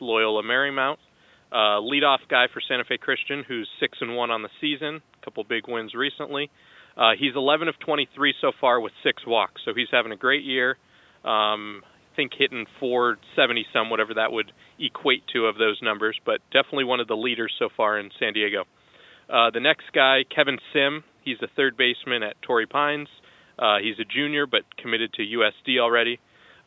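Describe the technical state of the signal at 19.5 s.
At 19.5 s the speech signal is intact, with only the faint room noise sitting about 49 dB below the speech and the normal band limit of call microphone processing, which leaves nothing above 8 kHz.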